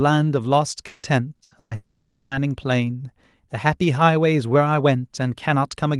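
From 0.87 to 1.74 s, the speech turns choppy and robotic. This is repeated packet loss. Four separate holes appear, the longest 160 ms. Each is patched by stretching the last sound, so nearly half of this stretch is synthetic fill.

From 1.75 to 2.34 s, the sound becomes a continuous smeared buzz for about 560 ms, with no true silence. The speech then resumes, but that part never returns. The likely cause is a long network dropout hidden by concealment.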